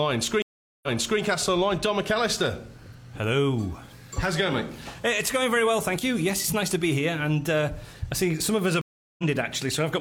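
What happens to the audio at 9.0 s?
A stream reconnect interrupts the audio from 8.81 to 9.24 s. The connection drops and playback goes silent for 370 ms. A fresh decoder then picks up mid-stream. The sound resumes roughly a third of a second further on, so a short stretch is skipped.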